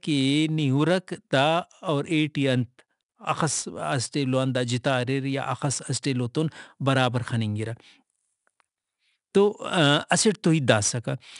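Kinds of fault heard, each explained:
4-bit ADPCM compression: each sample is stored as a coarse 4-bit step from a predicted value, so gritty hiss rides on the speech and swells with its loudness. A spectrogram shows noise filling gaps between harmonics, with nothing above 10.6 kHz, which fits a 22 kHz sample rate.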